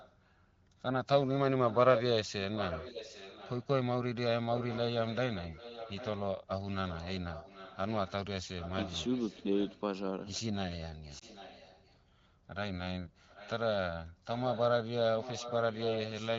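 A delayed copy of the speech trails the original by about 0.79 s at 0.0–0.16, 1.67–1.99, 2.55–3.67, 4.53–9.81, 11.09–12.02, 13.28–13.7 and 14.34 s to the end. This echo leak is likely from a loudspeaker at the far end whose echo canceller left residual pickup that was sent back. Its level ranges from about 25 dB to about 5 dB below the speech, loudest around 1.7–2.0 s.

At 11.19–11.24 s, inside the echo stretch, one AMR speech frame is lost. The decoder conceals it by repeating the previous frame's parameters at reduced gain, which produces a brief dip or warble in the sound.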